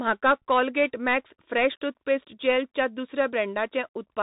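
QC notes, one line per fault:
throughout: Bluetooth CVSD headset codec. Nothing above 3.8 kHz survives, so the speech sounds narrow and boxy. Each sample is a single up-or-down step, which fits a 64 kbps link. The adapting step lags fast changes, so s sounds turn scratchy over granular hiss.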